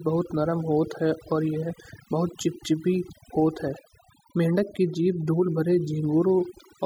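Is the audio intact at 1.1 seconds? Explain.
No. At 1.1 seconds the speech is affected by overdone noise removal, which runs through the whole clip rather than starting or stopping near that point. The noise reduction is set too aggressively: frequency bands that fall close to its noise estimate are pulled far down or cut entirely, and the quieter components of the voice are removed along with the noise. The background drops and breaks up into twinkling, warbling specks.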